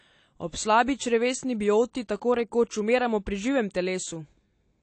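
Speech with AAC compression damage throughout: nothing above 8.6 kHz, so it's dull and smeared, with a warbly fizz, likely from low-bitrate AAC-LC around 32 kbps.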